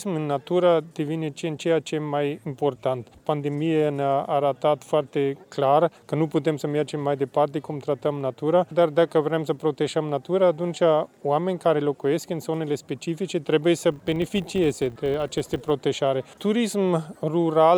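From 13.92 to 15.73 s a buzz at 50 Hz appears, the sign of a filter restarted on every block. The filter drops its stored state at each block boundary and begins again from silence, so every block opens with a small transient. At 50 repeats per second this points to blocks of about 20 ms. Unlike steady mains hum at the same frequency, this buzz is made of clicks and rises and falls with the level of the sound.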